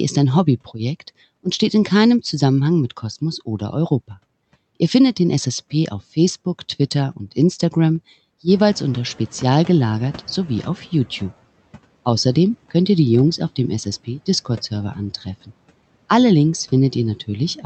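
At 8.48 s the room noise jumps by about 11 dB and the noise suppressor lags while catching up. The noise passes with less reduction at first, then sinks by about 12 dB by 11.34 s. On a spectrogram the noise floor steps up, then fades over 2.86 s.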